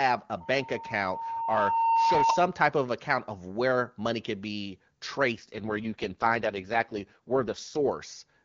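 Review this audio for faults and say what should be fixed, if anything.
From 0.40 to 2.60 s, a steady tone near 911 Hz swells over about a second and a half to a few dB above the speech. This is loudspeaker feedback squeal: the microphone picks up its own loudspeaker, and the loop gain at that frequency exceeds one. Lowering monitor gain, increasing mic-to-speaker distance or notching 911 Hz would prevent it.

From 5.32 to 7.92 s, the speech turns rough and synthetic without losing bandwidth or dropping out. This is an AMR rate drop, consistent with the clean AMR-WB stream stepping down from 23.85 to about 6.6 kbit/s on a weak radio link. Better signal coverage would prevent it.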